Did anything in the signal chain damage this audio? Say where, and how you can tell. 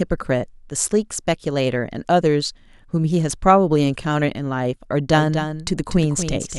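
Yes: a doubled audio track from 5.14 s to the end, a full-band copy about 10 dB down, a fifth of a second late, most likely a second capture path or misaligned edit.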